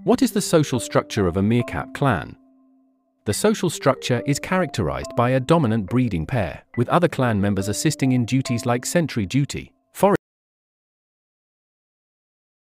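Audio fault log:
10.16–12.64 s, audio dropout to silence: the sound cuts off abruptly and never returns, leaving silence with no room tone, likely from the input being lost while recording continued. The waveform drops to a flat line and the spectrogram goes blank to the end.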